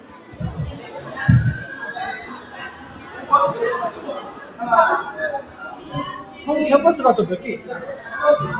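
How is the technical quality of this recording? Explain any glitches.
The quality suffers from a speech noise suppressor left running on these sounds. Everything is band-limited, with nothing above 4 kHz, which fits a G.711 call path.

Noise suppressor applied to sounds: throughout, steady parts and tails get mistaken for noise and pushed down. Levels pump by roughly 15 dB, so the sound flutters and thins.

Sound cut by the noise suppressor: this happens at 0.0–0.4 s, 0.72–1.09 s, 2.31–3.3 s, 3.9–4.6 s, 5.42–5.58 s and 5.76–5.92 s. In each stretch, held or fading sound sinks by about 6 to 8 dB. Decays end early, while sharp onsets survive.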